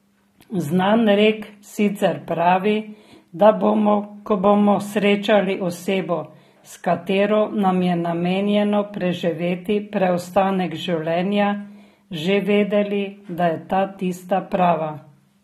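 Throughout the speech, nothing sits above 16.3 kHz and sibilants sound smeared and fizzy, likely from AAC compression at a low bitrate around 32 kbps.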